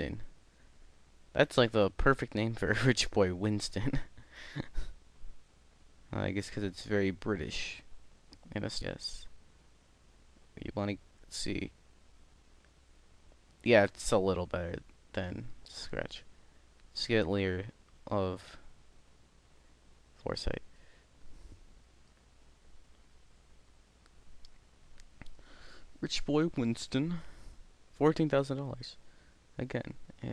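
At 8.81 to 8.83 s there is a skip ahead. Playback jumps forward over about 0.7 s of audio with essentially no gap, so whatever was happening before the jump runs straight into material from later on. This happens when a stretch of audio is discarded, in transit or as the jitter buffer sheds excess, while later audio is already queued. On a waveform the envelope changes abruptly at that point with no silent gap. A spectrogram shows a hard vertical seam where the harmonic patterns on either side fail to line up.

From 10.54 to 13.80 s a jitter buffer speed-up follows. The receiver had built up more buffered audio than it wanted, and it trimmed the excess by repeatedly cutting out short pieces one or a few pitch periods long. Together these cuts remove roughly 0.3 s, so the audio plays at about 110% speed with its pitch unchanged and sounds rushed. A spectrogram shows harmonic lines at normal spacing but events packed closer in time. 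A zoomed waveform shows small splice points where whole cycles are missing.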